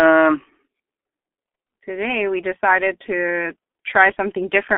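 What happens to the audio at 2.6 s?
At 2.6 s the speech sounds muffled and hoarse, with smeared consonants and no brightness above about 3.5 kHz or body below about 250 Hz. That is G.723.1 codec damage, heavy and present throughout the clip rather than only at this moment. The codec rebuilds speech from a coarse voice model updated only every 30 ms, at a rate that fits roughly 6 kbit/s, so rapid detail and sibilance are lost.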